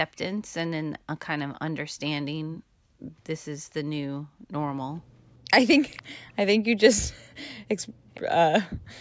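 At 1.53 to 1.71 s a faint copy of the speech comes back about 0.46 s behind the original, sitting far below it. This is an echo leak, likely from a far-end loudspeaker whose echo canceller let part of its microphone pickup return into the call. The room sound then dips sharply, by about 36 to 37 dB, at 2.56 to 3.2 s, 4.2 to 4.51 s and 5.02 to 5.5 s, recovering each time. This is background gated by the echo canceller: while the loudspeaker played, the canceller pulled the microphone down hard and released it afterwards. Louder scraps of the same 0.46 s echo return at 5.91 to 6.03 s and 7.82 to 8.2 s. During the second one the background briefly drops out again at 7.89 to 8.08 s, and a final short gap follows at 8.75 to 8.88 s, about 38 dB deep.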